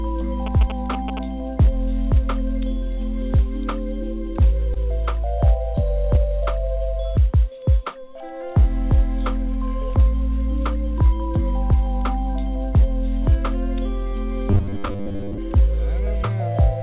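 From 0.46 to 1.19 s, GSM signalling bursts gallop through as short 217 Hz buzzes. A nearby 2G phone's radio bursts are rectified by the audio circuit, sitting roughly 10 dB below the sound.

At 4.74 to 4.77 s, short concealed packet loss leaves a brief smear. About 20 ms never arrived in time. The receiver continued the preceding sound for 14 ms, then blended back.

From 14.50 to 15.38 s, the sound turns rigid and metallic, buzzing at 100 Hz. This robotic sound likely comes from repeating a 10 ms buffer, replacing most of the real audio.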